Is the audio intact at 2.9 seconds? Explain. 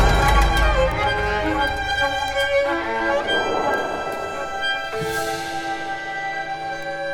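Yes, the audio is intact at 2.9 seconds, with no dropout, click, distortion or other fault to be heard at that point.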